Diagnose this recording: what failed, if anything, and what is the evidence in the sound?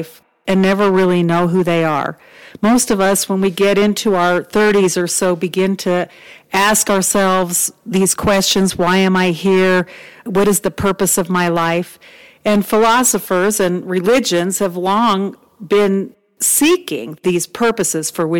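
Hard clipping runs through the whole recording. Every louder syllable of speech carries a harsh, buzzing fuzz rather than occasional crackle, which points to heavy overload: the signal was driven roughly 16 dB past what the gain stage or converter could pass, so around a tenth of all samples were flattened at that stage's limit. Those squared-off peaks add strong upper harmonics, heard as grit smeared across the voiced sounds. The flat tops cannot be restored afterwards.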